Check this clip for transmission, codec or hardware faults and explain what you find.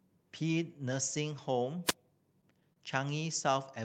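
Two faults turn up in this speech, both brief.

From 1.85 to 1.94 s there's a wireless microphone noise hit: the FM radio link fades, receiver noise swells, and you get a quick swish of static.

At 2.73 to 2.79 s there's a short stall from a late packet. The jitter buffer ran dry, so about 30 ms of sound gets held and stretched, nothing lost, just a slight drag.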